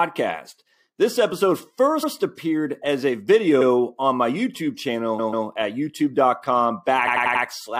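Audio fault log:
2.02–2.12 s, 3.60–3.67 s, 5.18–5.46 s and 7.06–7.43 s: repeated frames. A short block of compressed audio plays again: 93 ms once, 70 ms once, 139 ms twice, then 93 ms four times. Each replay stutters and lengthens the clip.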